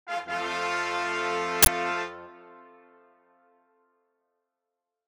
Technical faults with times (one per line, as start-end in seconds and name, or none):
1.63-1.67 uninitialised buffer